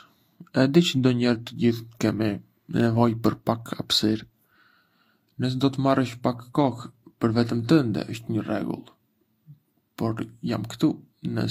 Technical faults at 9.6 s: transcoding between lossy codecs

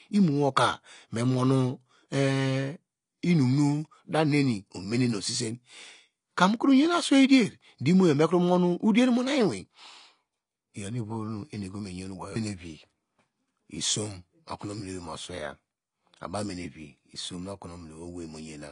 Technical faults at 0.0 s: AAC compression

